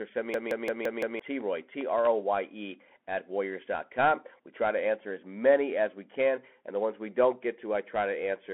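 Speech heard through a Bluetooth CVSD headset codec for its full length, with a narrow, boxy tone. Nothing passes above about 3.8 kHz, and the low end is thin below roughly 250 Hz, which fits a 64 kbps CVSD link. The one-bit delta coding cannot keep up with loud, bright sounds, so sibilants come out scratchy and a fine granular hiss sits under everything. On a spectrogram this shows as a hard ceiling near 3.8 kHz with empty space above it, and a speckled noise floor between words.

A system hang loop starts right after "or send me" and runs from 0.34 to 1.2 s. The audio hardware kept replaying the same stretch of its ring buffer while the system stalled. A 0.17 s slice repeats about five times at 5.86 Hz, giving a machine-gun stutter, and around a second of real speech is lost. The loop length fits an 8192-sample buffer. In the waveform, identical blocks sit side by side, and on a spectrogram the same pattern recurs at even spacing.

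Processor overload crackle follows from 1.41 to 2.07 s. The processor missed a run of very short buffer deadlines, and each miss was filled with silence. That leaves a handful of sub-millisecond dropouts with hard edges, heard as a gritty crackle riding on the speech. The size of the gaps fits buffers of about 0.7 ms. The waveform shows tiny flat gaps with abrupt edges, and the spectrogram shows thin vertical broadband streaks at each one.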